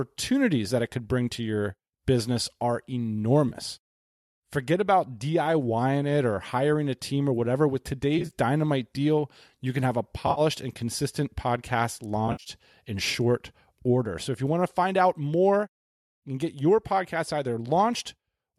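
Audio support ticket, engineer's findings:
AAC frame loss with concealment at 3.49 to 3.54 s, 8.19 to 8.32 s, 10.27 to 10.41 s and 12.28 to 12.50 s. Brief smeared, noisy, phasey patches where the decoder rebuilds missing frames from the last good spectrum. First gap about 30 ms, which fits three 10 ms frames. Later ones scattered losses over 100 to 180 ms, runs up to roughly 70 ms. Short frames are likely from the low-delay AAC stream, whose coding damage is light.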